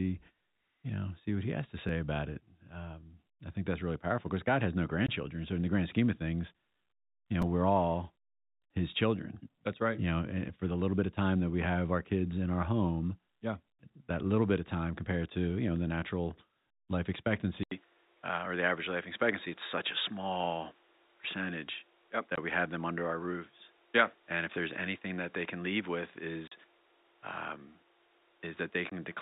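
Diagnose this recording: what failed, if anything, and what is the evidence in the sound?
At the driver or buffer stage, playback ran dry and the last 5 ms buffer was replayed, a repeated buffer. Right after "has to", at 1.89 s, it plays twice, and after "you know", at 7.42 s, three times. Each sounds like a brief click-buzz with hard joins.

On the network side, packet loss filled with silence leaves hard-edged gaps. There are 20 ms gaps after "has no" at 5.07 s and at 22.36 s and 28.90 s, and a 40 ms gap from 26.48 to 26.52 s. These fit 20 ms packets, one or two lost at a time.

From 17.63 s the sound turns duller after an 80 ms silence, with a new noise floor about 35 dB below the signal at the same level. This is likely an input switched to a poorer device at the capture stage, such as another microphone.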